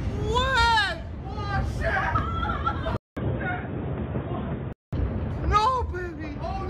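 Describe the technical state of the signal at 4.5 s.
The input likely switched to a poorer device from 2.97 s to 4.93 s, so 4.5 s falls inside it. That device passes nothing above 3.7 kHz, so the sound turns dull and boxy at much the same level. A faint new background noise appears, after a 200 ms silence at the switch.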